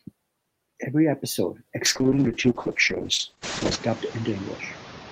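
A short speech clip with two faults. Noise suppressor artifacts run throughout. The steady background is pulled down by about 8 dB between phrases and swells back under the talker. This pumping follows the speech on and off, which sets it apart from a codec fault. It gets more exposed after the room noise rises by about 18 dB near 3.5 s, still sitting about 17 dB below the speech. A call bitrate drop begins at 1.87 s and lasts to the end. The audio turns rough and watery, and its bandwidth narrows from 20 kHz to 8 kHz, so it sounds muffled. The coarseness fits the encoder falling from around 32 kbps to about 6 kbps and staying at its lowest for 1.9 s. Unlike the suppressor's pumping, this degrades the voice itself and starts at one clear moment rather than tracking pauses.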